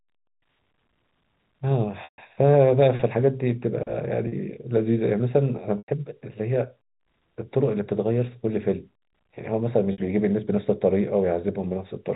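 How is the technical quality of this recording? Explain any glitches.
The recording has four short dropouts from packet loss with pitch repetition, at 2.04, 4.28, 5.78 and 9.92 s, lasting about 140, 40, 100 and 60 ms. When audio went missing, the receiver looped the last pitch period and faded it out over roughly 50 ms. The 40 ms gap just sounds like a briefly held, buzzy tone. The 140 and 100 ms ones fade into silence before the speech cross-fades back in. The 60 ms gap sits in between. All the gap lengths are multiples of 20 ms, which fits 20 ms packets. Underneath, the telephone-band G.711 coding comes through as expected.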